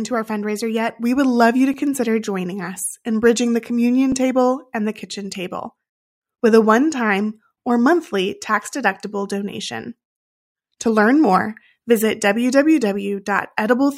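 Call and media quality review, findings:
Two tiny skips forward in the speech: 1.74 s, after "would love you to", before "consider joining us in"; 4.12 s, after "us in bridging the". Likely dropped buffer (overrun) on capture: unread samples, roughly a millisecond or two, overwritten, edges spliced without a gap.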